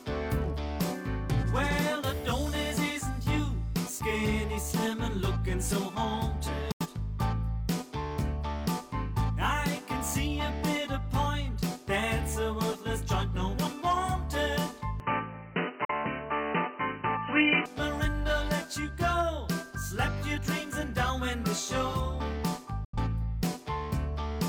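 At 6.72 s the audio mutes for about 85 ms after a 3 ms fade, a digital broadcast dropout. The receiver lost valid frames, and the gap's length fits two lost frames of roughly 43 ms each. Whatever was transmitted then is gone.

From 15.00 to 17.66 s the sound turns dull and boxy, with nothing above 3 kHz, a level shift of about 5 dB, and a new low noise floor. There is no gap at the change. The likely cause is the input switched to a poorer device.

Inside that stretch, at 15.85 s, a single-frame dropout cuts about 43 ms. At 22.85 s another two-frame dropout removes about 85 ms, again behind a 3 ms fade.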